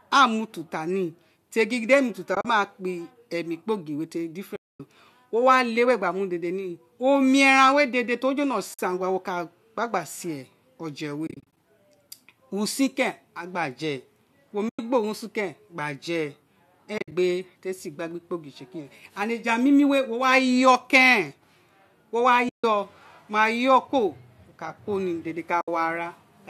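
AAC frame loss with muting occurs at 2.35, 4.56, 8.74, 11.27, 14.69, 16.98, 22.49 and 25.61 s. The decoder zeroes each lost frame, and the overlapping windows fade the sound out and back in. This leaves soft-edged holes of 50 to 240 ms, some broken into scattered gaps. The faint graininess throughout likely comes from low-delay AAC compression.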